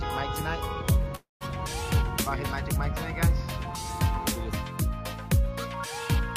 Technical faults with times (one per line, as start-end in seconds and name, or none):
1.15-1.44 call audio freeze